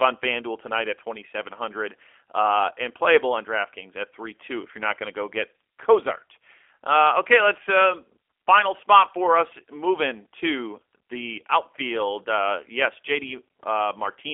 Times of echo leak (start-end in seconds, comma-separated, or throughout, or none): none